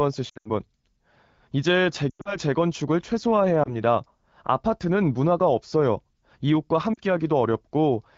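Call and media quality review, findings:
Lost AMR speech frames, 0.29–0.51 s and 2.10–2.37 s: speech smears and warbles, then sags toward silence before recovering rough. Losses total about 140 ms each, bunched in runs up to 80 and 100 ms. Decoder concealment repeats the last pitch and vocal-tract settings at falling gain. Brief dips at 3.63–3.75 s and 6.94–6.98 s fit one or two missing 20 ms frames. Light AMR-WB coding at 12.65 kbit/s underneath.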